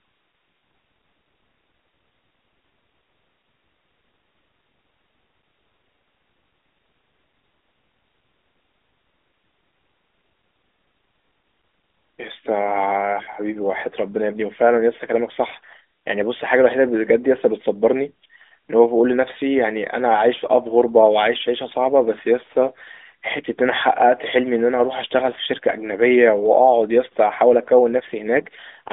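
No technical faults can be heard anywhere in the recording. The speech comes over an AMR narrowband mobile codec path, with the band held to roughly 250 Hz to 3.6 kHz and nothing above about 3.8 kHz, and the light coding texture fits the 12.2 kbps mode.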